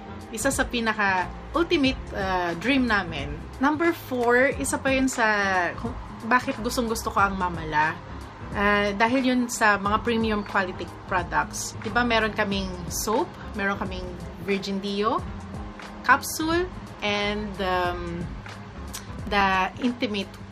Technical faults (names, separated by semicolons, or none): CD scratch ticks